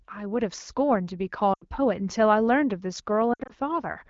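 Lost AMR speech frames at 1.54–1.65 s and 3.33–3.52 s: the decoder repeats stale pitch with falling gain, so speech smears and fades. Spectrograms show frozen harmonics decaying toward gaps.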